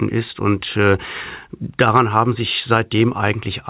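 No technical faults occur at any point in time; the sound simply comes through a telephone-grade call path with nothing above 4 kHz.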